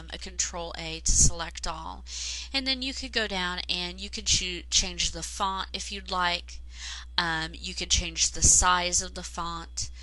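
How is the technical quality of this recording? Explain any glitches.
Nothing in the recording stood out as a glitch on listening.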